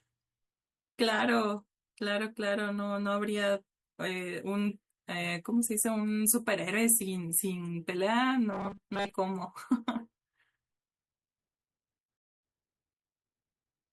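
From 8.52 to 9.14 s the speech turns robotic, a rigid metallic buzz at 200 Hz that loosely tracks the words. This is likely robotic sound from repeated short buffers. Late audio forced repeats of a 5 ms chunk, covering most of the span.

At 12.17 s a rebuffering stall occurs. The player ran dry of downloaded audio and went silent until 12.43 s. Speech then resumes exactly where it stopped. Nothing is lost, but about 256 ms is added.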